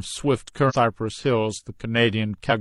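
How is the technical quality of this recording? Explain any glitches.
There's one real glitch in the recording. At about 0.65 s, running to 0.73 s, the speech is interrupted by a short burst of damaged data in the compressed stream. Part of the encoded file at that spot is corrupt, with bytes lost, zeroed or overwritten. The decoder misreads or drops the frames there, loses sync and hunts for the next valid frame header before it can carry on. You hear roughly 80 ms of disturbance cutting into the speech.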